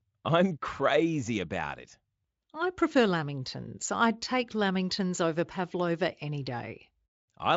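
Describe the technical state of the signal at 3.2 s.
At 3.2 s the signal is intact, with no audible fault at that point.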